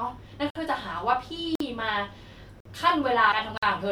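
A gap between chunks opens at 0.50, 1.55 and 2.60 s, each a 50 ms hole, spaced so that 1 s of speech plays between them. The speech is delivered in one-second chunks with silence inserted at every join, so nothing is lost but the flow breaks abruptly.

Damaged data in a compressed stream follows from 3.28 to 3.33 s. Corrupted bytes make the decoder misread a frame and hunt for the next valid header, producing a brief glitch in the speech.

A final 50 ms chunk gap at 3.58 s continues the same one-second pattern.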